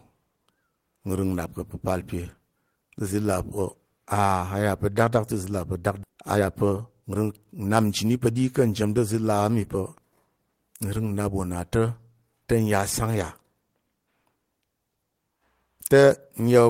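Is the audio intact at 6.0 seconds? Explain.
No. At 6.03 s about a second of audio was dropped while later audio waited, a skip ahead, so the speech jumps forward with no gap. From 6.10 to 8.41 s a jitter buffer speed-up trims short pitch-period pieces, removing about half a second, so speech runs at 120% speed, hurried but at unchanged pitch.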